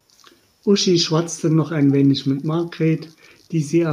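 Echo leak at 2.36 to 2.41 s: a very faint, brief copy of the speech returns 313 ms late, likely loudspeaker pickup that an echo canceller failed to remove.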